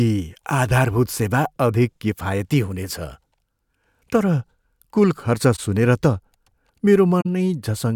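Speech with corrupt frames concealed at two spots: just after "कुल खर्च" at 5.55–5.59 s (two frames) and at 7.21–7.26 s (three frames), where the decoder muted or smeared damaged AAC frames.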